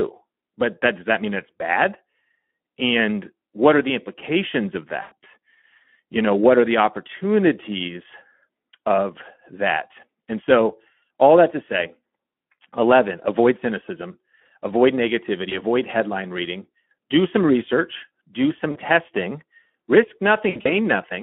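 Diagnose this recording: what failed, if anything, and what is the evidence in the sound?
Speex codec, throughout, at the codec stage: speech sounds hoarse and noisy within a 200 Hz to 3.4 kHz band, as starved excitation bits suggest roughly 11 kbps.

VoIP packet loss concealed by the speech codec, at the network stage, at 5.01–5.12, 15.49–15.55, 18.71–18.79 and 20.49–20.73 s: the decoder stretches its last pitch and filter into a fading buzzy tone or coloured noise that lingers briefly afterward.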